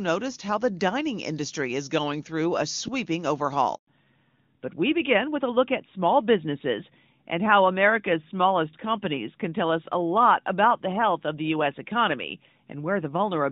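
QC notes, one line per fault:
3.75–3.87 s, handover gap: the sound fades out within a few tens of milliseconds and stays silent for 120 ms while the call switches networks. Unlike a packet-loss glitch there is no concealment buzz or repeated fragment, and the audio resumes in a different bandwidth.
3.87 s to the end, fallback to narrowband: after the gap nothing remains above 4 kHz, so the sound turns duller and rougher. The shift from clear HD Voice, consistent with AMR-WB at a high rate, to a narrowband codec, consistent with AMR-NB at 12.2 kbit/s, starts exactly at the handover. That timing and the hard 4 kHz ceiling distinguish it from a gradual low-pass EQ.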